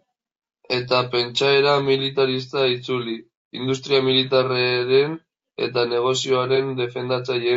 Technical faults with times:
0.00-7.56 low-delay AAC compression
6.56-6.61 AAC frame loss with concealment

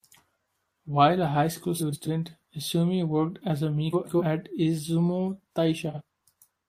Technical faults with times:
1.79-2.08 frames out of order
3.92-4.22 frames out of order
5.90-6.01 frames out of order

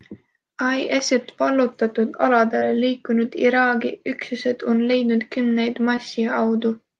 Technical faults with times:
2.59-2.63 short concealed packet loss
5.95-5.99 short concealed packet loss

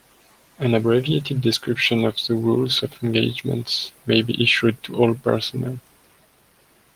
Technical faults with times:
none

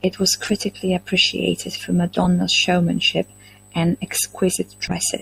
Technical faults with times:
0.43-0.50 corrupt frame decoded
2.13-2.26 corrupt frame decoded
4.87-4.94 corrupt frame decoded

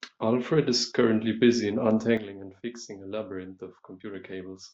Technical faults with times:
2.17-4.74 sudden gain jump

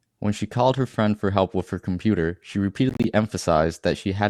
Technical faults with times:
2.89-3.04 Bluetooth dropout

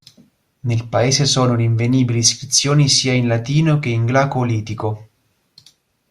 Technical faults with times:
none

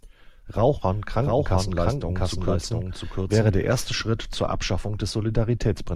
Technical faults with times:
0.74-4.02 doubled audio track

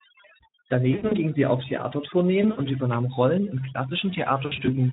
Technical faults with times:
0.00-4.92 overdone noise removal
0.91-1.15 VoIP packet loss concealed by the speech codec
2.42-2.61 VoIP packet loss concealed by the speech codec
4.45-4.77 VoIP packet loss concealed by the speech codec

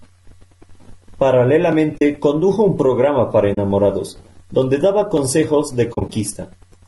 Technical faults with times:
0.00-6.87 low-delay AAC compression
1.97-2.02 AAC frame loss with muting
3.53-3.58 AAC frame loss with muting
5.93-6.10 AAC frame loss with muting

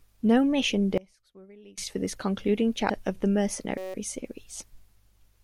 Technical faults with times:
0.98-1.78 one channel inverted
2.89 damaged data in a compressed stream
3.78-3.94 system hang loop

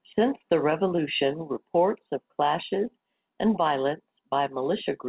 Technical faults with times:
0.96-0.99 short concealed packet loss

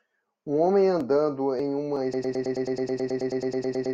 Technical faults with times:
2.14-3.93 broken-record loop

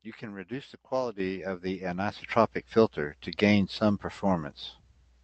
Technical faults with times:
1.20 microphone volume stepped up
2.22 microphone volume stepped up

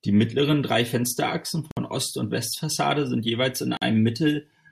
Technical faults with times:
1.71-1.77 gap at a join of encoded pieces
3.77-3.82 gap at a join of encoded pieces

